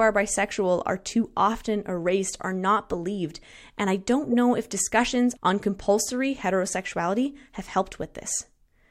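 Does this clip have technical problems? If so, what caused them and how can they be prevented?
Yes. At 4.32 to 4.34 s the speech is interrupted by a short burst of about 24 ms, heard as a squeak or blip peaking at around -20 dBFS. This is a corrupt frame decoded: bits inside roughly a single compressed frame were damaged, and the decoder played it anyway. Misread gains and spectral codes put energy at wrong frequencies for that frame's duration. Prevention: checksum each frame and conceal failed ones rather than decoding them.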